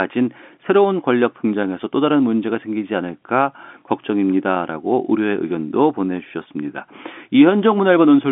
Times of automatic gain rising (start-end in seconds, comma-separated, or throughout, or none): none